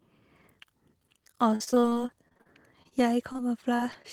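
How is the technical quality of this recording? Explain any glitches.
The recording has a stretch of repeated packet loss in the middle and three brief dropouts near the end.

From 1.55 to 3.40 s there is repeated packet loss (robotic sound). Audio data kept arriving too late or not at all, leaving well over a dozen holes of up to 46 ms each. The receiver patched each one by extending the preceding sound, so about a fifth of that span is synthetic fill. The speech comes out choppy and robotic, with pieces of it missing.

Short concealed packet loss then hits at 3.76, 3.92 and 4.02 s. Each time roughly 20 ms of audio failed to reach the decoder, and the receiver bridged the hole by continuing the last sound before blending back into the real signal. Each event is heard as a quick smear or wobble in the speech, and a short consonant there can disappear.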